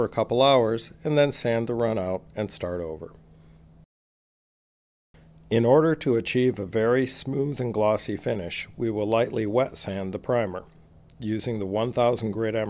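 No technical faults can be heard anywhere in the audio, and the signal holds steady and continuous for its whole duration.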